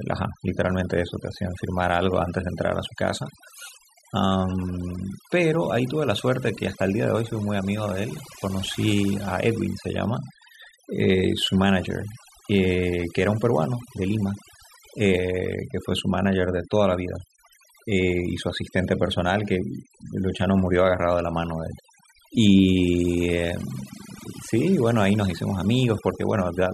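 Overdone noise removal runs through the whole of this speech recording: a noise reduction stage was pushed far too hard, so any frequency band sitting close to its noise estimate gets pulled right down or switched off, and the softer parts of the voice are cut along with the noise. Between phrases the background collapses to near silence scattered with twinkling specks.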